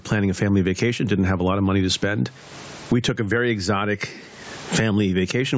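Gain pumping runs through the whole recording. The input gain was likely set far too high for the microphone, so a fast limiter or compressor clamps down each time the speech gets loud and releases in the pauses. The level swings by roughly 30 dB as a result. The room noise sits about 43 dB under the speech, and the speech is left flattened and squashed.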